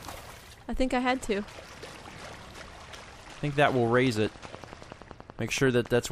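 From 3.69 s to 6.06 s a train of clicks runs at a regular 10.6 per second, around thirty near-identical pulses peaking a few dB above the audio, likely interference or a faulty connection. Their even spacing and matching shape distinguish them from random crackle.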